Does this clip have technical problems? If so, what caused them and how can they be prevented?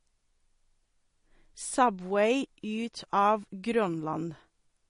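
Yes. MP3 compression damage runs throughout, with nothing above 10.6 kHz and watery, swirling s sounds. A plain low-pass filter wouldn't swirl. This likely points to about a 40 kbps encode. Encoding at a higher bitrate, or keeping an uncompressed copy, prevents it.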